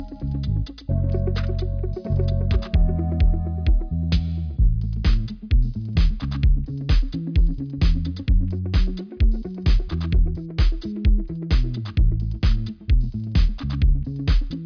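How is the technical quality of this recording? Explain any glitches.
No glitches to report: the recording holds steady throughout with no dropouts, clicks, distortion or other technical faults.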